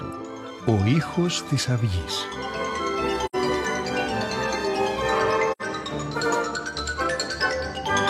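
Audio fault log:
3.25–3.36 s and 5.51–5.62 s, AAC frame loss with muting: two short gaps of about 85 ms each, which fits two lost frames apiece. The decoder zeroes the missing spectrum, and the overlapping windows fade the sound out and back in, leaving soft-edged holes rather than hard cuts.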